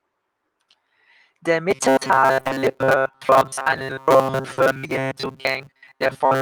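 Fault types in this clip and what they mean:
Short concealed packet loss: the decoder filled brief holes by extending the preceding sound and blending back. This is heard as quick smears at 0.71 s, from 2.39 to 2.51 s, and for 40 ms at 4.53 s. Each passes in a moment, unlike the continuous buzz.
Robotic sound from repeated short buffers: from 1.71 s to the end the speech takes on a rigid metallic buzz at 133 Hz. It is likely caused by replaying about 7.5 ms of audio for most of that stretch. The buzz persists throughout, unlike isolated concealment smears.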